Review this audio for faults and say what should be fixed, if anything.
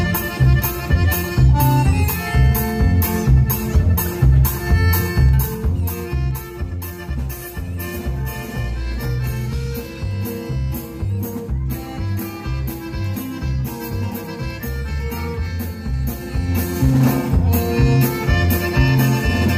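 A gain control was moving in unsmoothed 2 dB steps, about four per second, producing zipper noise: a ticking that rides on the sound from 5.16 to 6.32 s as the level drops by roughly 10 dB, and from 15.8 to 17.04 s as it rises by roughly 10 dB. Interpolating the gain per sample, or ramping each step over a few milliseconds, would prevent it.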